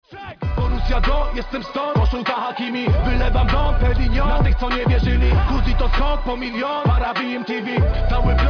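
Nothing in the recording stood out as a technical fault on listening.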